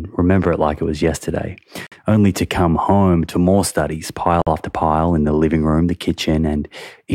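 At 1.87 s, between "like it was yesterday" and "only to come home", the speech stops dead for 50 ms, and the same happens at 4.42 s, between "home to more studies" and "after pile in the". These are gaps between chunks: the audio arrives in 2.5 s blocks and silence is inserted at each join, so nothing is lost but the flow breaks. Each sounds like a brief hole, recurring at a steady interval.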